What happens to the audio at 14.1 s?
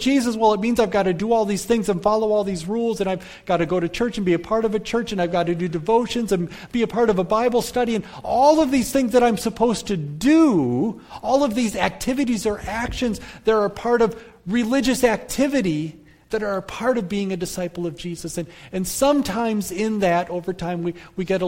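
Nothing goes wrong at 14.1 s; the audio plays through that moment intact, with no dropout, click or distortion.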